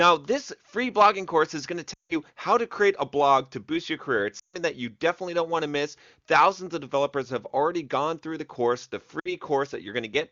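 Lost AMR speech frames show up three times. At 1.93 to 2.16 s, just before "how to create a", about 160 ms drops out. At 4.39 to 4.57 s, ahead of "that you definitely don't", about 140 ms goes. At 9.19 to 9.32 s, right after "through the course the", a shorter 60 ms gap appears. Each time the decoder fills in by repeating its last good pitch and vocal tract settings at fading gain, so the sound drops to near silence within two frames before picking back up, weak or rough for a moment. Around those gaps, the clean wideband AMR audio points to a high bitrate.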